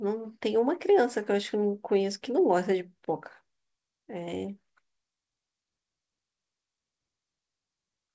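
Speech recording; no technical faults can be heard.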